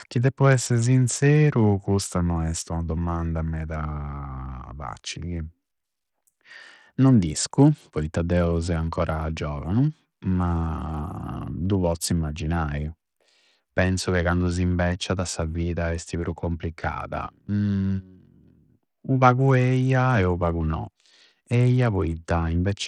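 From start to finish the speech carries plainly audible damage that points to Bluetooth SBC compression as the likely cause, at a rate that fits roughly 80 kbps. Starved of bits, the upper sub-bands fade in and out, so sibilants lose their edge and a gritty, aliased haze clings to the sound. On a spectrogram the treble appears as broken, patchy blocks that switch on and off, above a coarsely quantised, noise-filled lower range.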